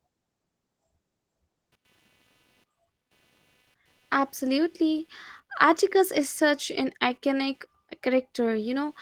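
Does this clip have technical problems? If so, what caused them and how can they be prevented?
Yes. The speech carries Opus voice compression throughout. At this rate the codec runs SILK's linear-prediction coding for the lower band with a CELT layer above 8 kHz, spending few bits on the excitation, so the speech sounds plainly hoarse and faintly robotic. The sound fits about 16 kbps in 20 ms frames. On a spectrogram, content stops near 19.8 kHz and the band above 8 kHz looks coarse and patchy, changing in frame-sized blocks. Encoding at a higher bitrate, or keeping an uncompressed master, would prevent this.

From 1.72 s to the end there is computer activity noise. Processor, graphics or mouse load currents disturb the ground shared with the audio circuit, which adds a buzzy, chirping pulse train at around 300 Hz, roughly 40 dB below the speech, that follows machine activity rather than the voice. 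A spectrogram shows a faint harmonic comb with vertical striations, and the waveform shows a low-level buzz in the pauses. An external USB interface, a ground-loop isolator or a battery-powered laptop would prevent it.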